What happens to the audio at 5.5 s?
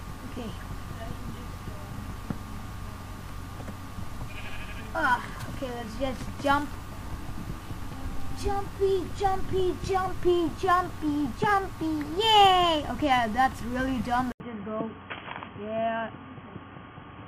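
Nothing goes wrong at 5.5 s; the audio is intact there.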